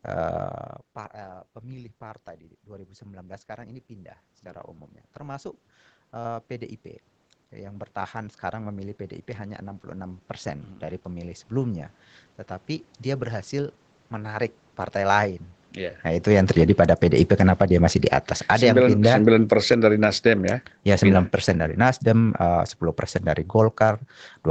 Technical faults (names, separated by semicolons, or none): automatic gain rising; automatic gain falling